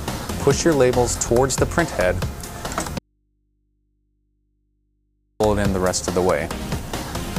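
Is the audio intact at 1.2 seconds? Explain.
Yes, the audio at 1.2 seconds is intact, with no dropout, click, distortion or other fault to be heard at that moment.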